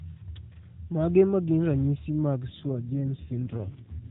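From 2.48 s to the end at 4.10 s, the speech undergoes an AMR rate drop. The narrowband mobile codec, lightly coloured before this point, turns rougher, buzzier and more synthetic, which fits a switch from 12.2 kbps to 4.75 kbps with the freed bits spent on error protection. Unlike a dropout or a bandwidth switch, there is no gap and the 4 kHz ceiling stays put. Only the texture degrades.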